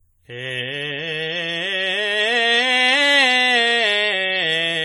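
Throughout, the music sounds swirly, hollow and smeared, with blurred attacks; this is likely generation loss from about seven passes through a lossy codec such as 64 kbit/s AAC.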